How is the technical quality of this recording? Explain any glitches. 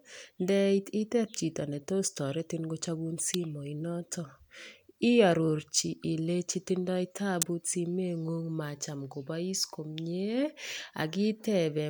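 Two sharp snaps sit on top of the speech, at 3.34 s and 7.42 s, consistent with an electrical switching spike. These are likely arcs from a nearby switch or motor coupling into the audio line. The first peaks around -15 dBFS; the second is much harder, close to -5 dBFS.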